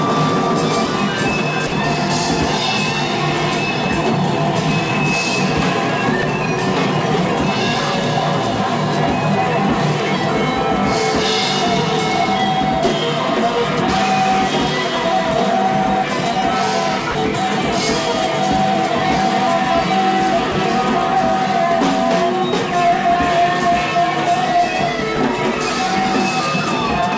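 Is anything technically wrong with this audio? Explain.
Yes. Brief stretches of sound are swapped for flat, steady noise at 1.67–1.72 s, 6.22 s, 17.11–17.15 s, 20.52–20.55 s and 25.16 s, lasting 10 to 50 ms each. This is likely sound dropped by the voice detector: the sender judged the sound to be background and stopped transmitting, and the receiver filled the gap with comfort noise. Packet-loss concealment would instead stretch or repeat the preceding sound. The clip also passed through a call path with nothing above 8 kHz, which fits G.722.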